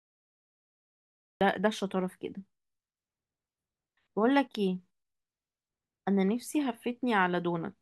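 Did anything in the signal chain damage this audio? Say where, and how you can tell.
Yes, a cut-off start at capture: pure digital silence until 1.41 s, then the speech jumps in mid-sound with no attack or fade, so recording began late.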